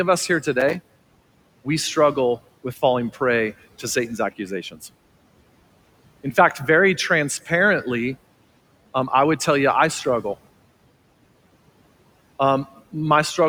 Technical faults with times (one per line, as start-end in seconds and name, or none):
0.57-1.58 processor overload crackle